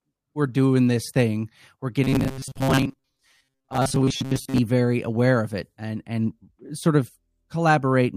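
Robotic sound from repeated short buffers runs from 2.04 to 4.59 s in this speech clip, just after "doing this thing we're" and ending before "very aware of it". The voice becomes a rigid metallic buzz near 134 Hz across most of that stretch, likely caused by new audio arriving too seldom so that the playback loops a segment of about 7.5 ms while skipping the real material.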